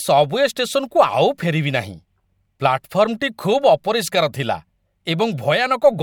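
No technical fault can be heard in the speech recording, so there is nothing to time or trace to a cause.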